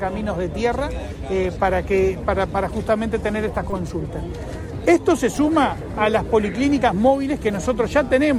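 At 2.47 s, 3.71 to 3.73 s and 5.37 s a repeated buffer replays a 5 ms slice of sound with hard joins, four times over at 3.71 s. It is heard as a click or buzz, not a dropout, because nothing goes silent.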